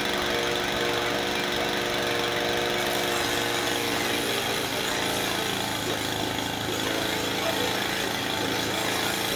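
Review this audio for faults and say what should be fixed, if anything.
No faults turned up in this audio, so nothing needs to be fixed.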